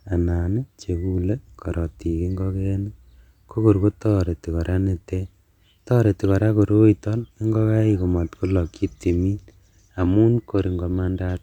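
No technical faults can be heard in this speech recording. There is nothing to report at any point in the clip.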